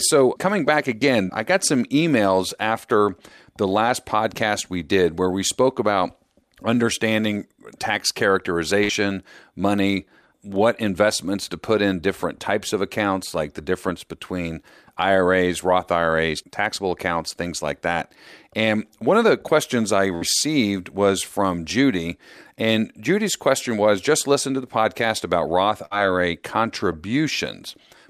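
At 8.83 s, 8.92 s ends the first burst of packet loss. Others follow at 20.15 s, just after "of the questions I", and 25.85 s. Each lasts under 90 ms. The last sound is held for about 55 ms as a fading buzz or hiss. Then 60 ms of speech is skipped.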